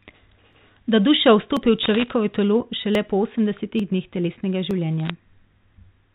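Single sharp clicks at 0.53 s and 1.57 s are likely dropped samples: under a millisecond goes missing, so the waveform jumps, giving one isolated tick rather than a cluster. From 1.83 to 2.10 s, bit errors on a digital phone line add a burst of scattered ticks, crackle sitting over intact speech, denser and more irregular than those lone clicks. From 2.48 s to the end, de-emphasis applied wrongly tilts the treble down smoothly, about 14 dB at 10 kHz relative to 1 kHz, so the sound is dull and muffled rather than abruptly band-cut, with the G.711 telephone coding underneath unchanged. Further lone clicks from dropped samples fall at 2.95 s, 3.80 s and 4.71 s, and a second short crackle of bit errors runs from 5.00 to 5.10 s.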